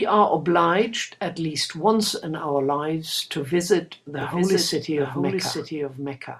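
Speech plays cleanly at first, but from 4.21 s to the end it carries a doubled audio track. A second full-band copy of the speech runs roughly 0.7 s behind and about 5 dB quieter, so each syllable returns as a flat, out-of-step repeat. It is likely caused by the signal being captured twice through a slower path or by an edit holding two copies. Unlike an echo or reverb, the copy switches on abruptly, repeats once rather than decaying, and adds no room colouring.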